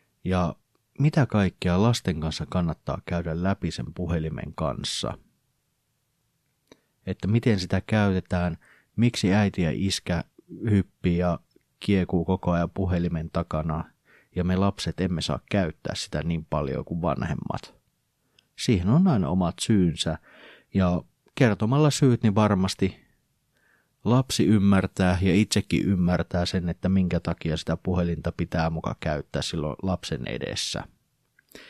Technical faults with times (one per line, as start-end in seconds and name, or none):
24.16-26.16 pre-emphasis left on